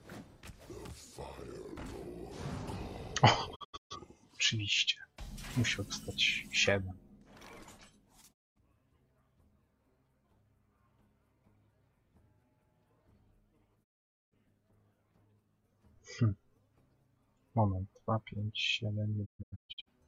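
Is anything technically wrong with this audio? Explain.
Yes, there's a digital broadcast dropout four times, at 3.54, 8.32, 13.83 and 19.24 s. The receiver lost good frames and muted, fading out over about 20 ms each time. The first and last gaps break into several short holes, and the programme resumes with material missing.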